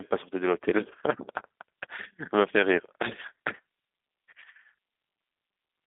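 Speech, coded with G.729 for the whole clip. The line band runs from about 250 Hz to 3.6 kHz, so it sounds thin and boxy. The codec damage is plainly audible. Each frame is rebuilt from a filter, pitch predictor and a few pulses, which fits 8 kbit/s G.729A. Speech stays intelligible but sounds rough and synthetic.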